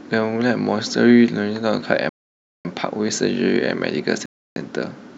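At 2.09 s the speech drops to silence for about 0.56 s, and again at 4.26 s for 0.30 s, each time picking back up afterwards. This sounds like a Bluetooth stall, likely from interference delaying packets until the headphone buffer emptied. Both waveform and spectrogram show flat, empty gaps.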